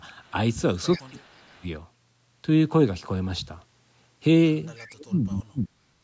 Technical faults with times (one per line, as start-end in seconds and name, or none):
0.25-0.30 echo leak
0.92-1.00 echo leak
0.98-1.66 speech suppressed in double talk
1.39-1.51 echo leak
4.75-4.87 echo leak
4.87-5.95 speech suppressed in double talk